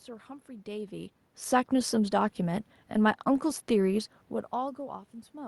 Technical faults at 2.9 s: none

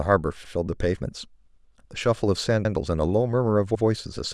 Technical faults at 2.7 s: overlapping chunks

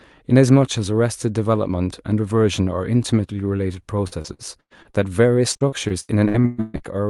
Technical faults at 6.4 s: repeated packet loss (robotic sound)

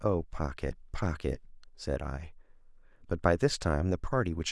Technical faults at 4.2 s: none

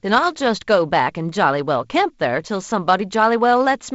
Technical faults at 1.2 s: none

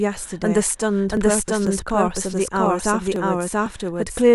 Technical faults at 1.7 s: doubled audio track; periodic USB or driver dropouts

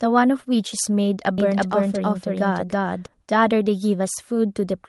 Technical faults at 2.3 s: doubled audio track

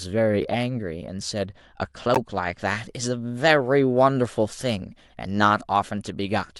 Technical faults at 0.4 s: none

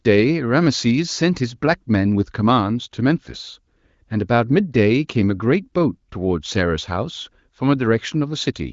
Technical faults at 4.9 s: none

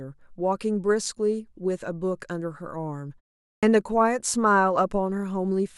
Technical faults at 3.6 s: clipped start after a pause

